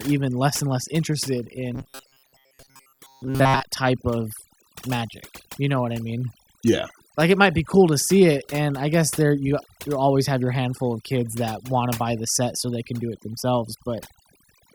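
Speech with overdone noise removal running throughout. Frequency bands near the noise estimate are cut hard, so the background drops and breaks up into twinkling specks. Unlike a plain low-pass or muffled recording, the artefacts flicker in and out from moment to moment. From 1.75 to 3.62 s, between "less and less interested" and "type of magic", the voice becomes a rigid metallic buzz locked at 134 Hz. This is likely robotic sound from repeated short buffers of about 7.5 ms, with most of the real audio skipped. It is set apart from a dropout by having no silence and from pitch correction by its fixed, unchanging drone.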